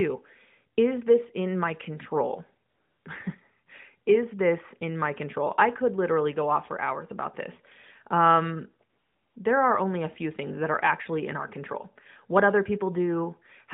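From 2.70 to 3.06 s, after "this in my control", and from 8.90 to 9.36 s, before "there are only a", AMR comfort noise replaces the real background with smooth, steady synthetic hiss. Unlike a dropout, these gaps are never silent, and the hiss switches in and out abruptly.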